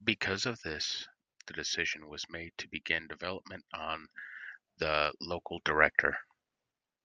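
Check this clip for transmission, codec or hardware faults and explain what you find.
Nothing stood out on listening to the speech in this recording.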